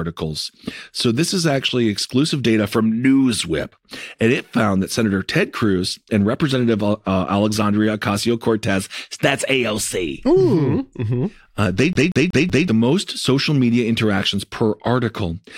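CD stuck on one turn, from 11.93 to 12.68 s in this speech clip: a scratch keeps knocking the laser back one track, so the same 0.19 s slice replays four times, each pass broken by a brief mute, before "the most social media" resumes.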